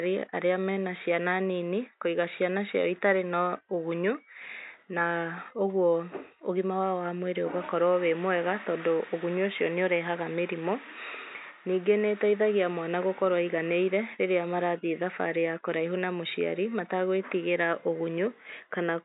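No faults found in the speech, with room noise sitting about 50 dB below it.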